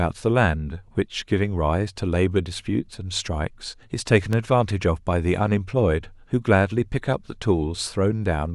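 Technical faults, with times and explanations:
4.33 s, loud pop: a sudden voltage step or spike, likely from a plug, switch, static discharge or driver glitch, entered the signal path and was added to the speech. The electronics after it shaped that spike into a brief pulse, so it comes through as a single sharp pop, roughly 10 dB louder than the speech, lasting only a couple of hundredths of a second, while the speech carries on underneath it.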